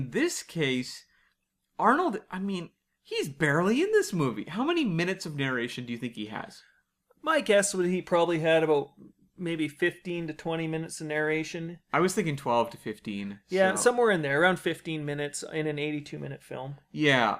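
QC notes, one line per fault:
No faults were heard anywhere in the speech. There is nothing to log against any time in the recording.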